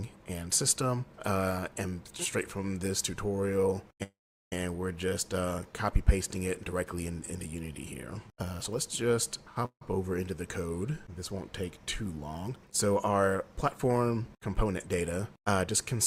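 At 4.03 to 4.53 s and again at 9.66 to 9.82 s the audio stalls, with the last sound fading to silence for about 380 ms and 80 ms. Then it picks up where it left off. This is a call audio freeze, likely from delayed packets draining the jitter buffer.

From 13.42 to 15.13 s a jitter buffer speed-up plays the audio about 9% fast at unchanged pitch, giving a hurried feel. The receiver trimmed short pitch-period slices, roughly 150 ms in total, to shed accumulated delay.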